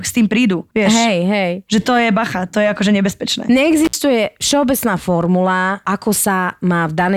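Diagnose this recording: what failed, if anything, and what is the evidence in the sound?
Right after "to je akože nebezpečné", at 3.85 to 3.94 s, the speech drops out for about 62 ms with a crackle at each edge and faint hiss in the gap. That is an intermittent contact in the analogue wiring: a loose cable or plug briefly opening the signal path.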